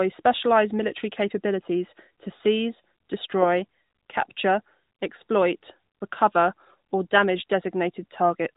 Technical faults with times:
none

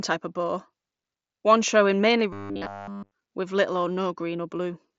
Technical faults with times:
2.33-3.14 robotic sound from repeated short buffers

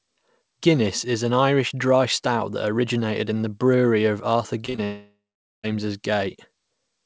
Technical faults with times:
4.66-4.80 short concealed packet loss
4.84-5.65 long network dropout

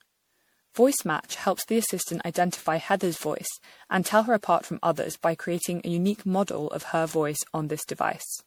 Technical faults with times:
0.00-8.46 generation loss

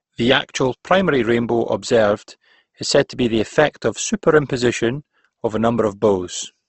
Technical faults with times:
0.00-6.69 Opus compression

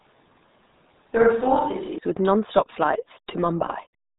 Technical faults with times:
0.00-4.18 RealAudio 14.4 codec
0.00-1.98 switch to a distant microphone

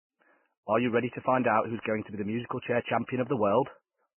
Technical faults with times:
0.00-4.19 Vorbis compression

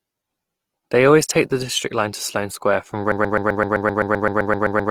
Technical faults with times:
0.00-4.90 Opus compression
3.12-4.90 broken-record loop

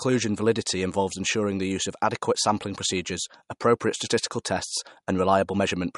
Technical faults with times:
0.00-5.98 MP3 compression

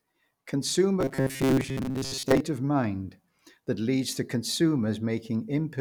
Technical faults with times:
1.00-2.40 robotic sound from repeated short buffers

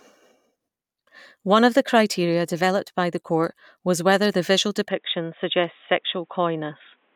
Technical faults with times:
4.88-7.16 input switched to a poorer device

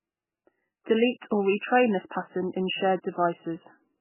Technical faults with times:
0.00-4.00 MP3 compression

